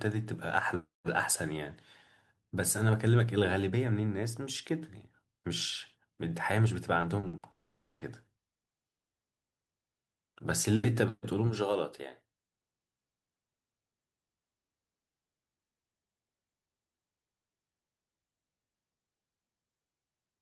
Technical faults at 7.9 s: long network dropout

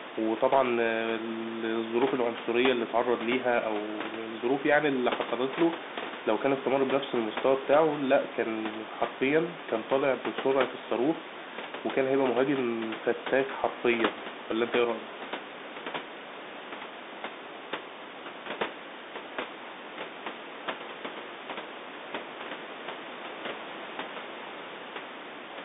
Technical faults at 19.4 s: Bluetooth CVSD headset codec

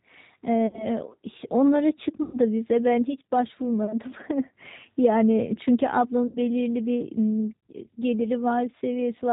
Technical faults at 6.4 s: G.729 codec; VoIP packet loss concealed by the speech codec

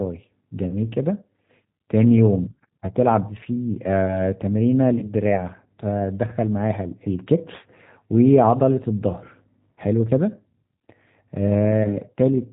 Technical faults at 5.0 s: G.729 codec; VoIP packet loss concealed by the speech codec

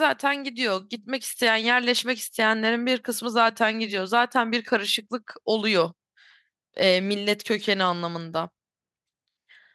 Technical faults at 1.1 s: none

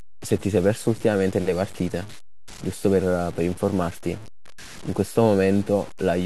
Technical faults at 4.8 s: low bit depth without dither

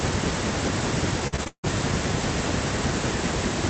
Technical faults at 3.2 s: none

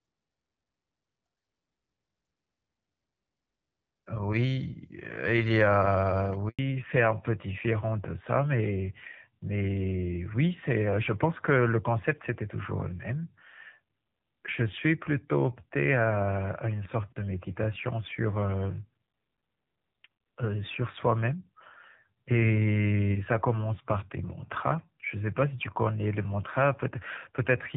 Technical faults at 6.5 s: handover gap; fallback to narrowband

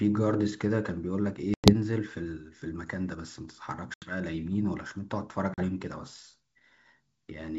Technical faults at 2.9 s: none

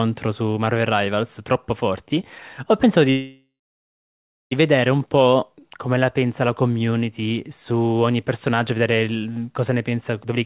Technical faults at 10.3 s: jitter buffer speed-up

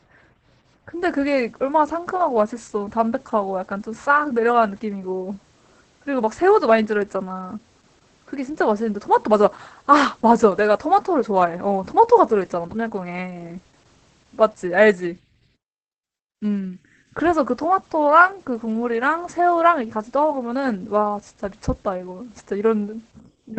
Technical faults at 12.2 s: Opus voice compression

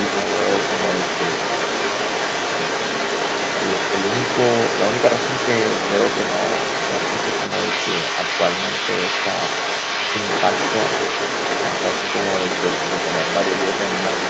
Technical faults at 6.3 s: other side's voice leaking through

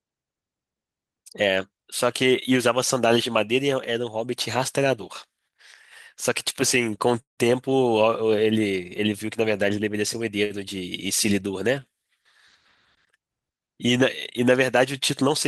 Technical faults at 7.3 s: call audio freeze

